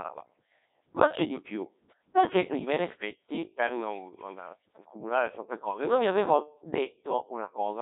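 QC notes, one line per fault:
Throughout, Codec 2 vocoder: the speech has a robotic, buzzy quality because the decoder rebuilds it from sine waves driven by pitch, voicing and a coarse spectral envelope rather than keeping the waveform, and the damage is heavy, which fits a very low rate near 1.6 kbit/s. A spectrogram shows smeared, regular harmonic stripes confined to roughly 300 Hz to 3.7 kHz with nothing above 3.8 kHz; the waveform looks smooth and periodic, lacking natural fine detail.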